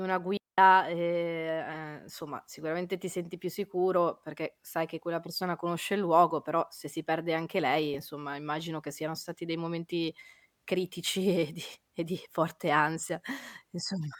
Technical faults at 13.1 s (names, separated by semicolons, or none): lost LE Audio frames